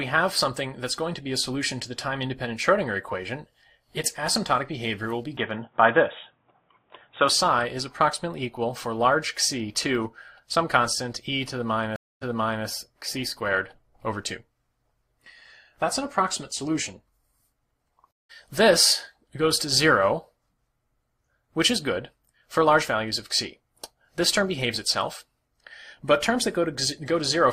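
From 5.37 to 7.29 s the sound turns dull and boxy, with nothing above 3.8 kHz, a level shift of about 5 dB and a faint new noise floor. There is no gap at either edge, which separates it from a reconnect. The likely cause is the input switched to a poorer device.

At 11.96 s a stream reconnect leaves about 0.25 s of silence, then playback resumes 0.44 s earlier and repeats material. At 18.11 s another lasts about 0.18 s and resumes roughly 0.2 s later, skipping ahead. The jump in position is what distinguishes these from plain dropouts.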